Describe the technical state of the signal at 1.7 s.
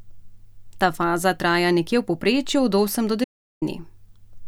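At 1.73 s the speech signal carries a bit error spike: a single sample whose value has been thrown off by one flipped bit, most likely in memory or on a digital link, so it jumps by a power of two and snaps straight back. Because it lasts only one sample, it is heard as one sharp, broadband tick that sits on top of the speech and bears no relation to its level or spectrum.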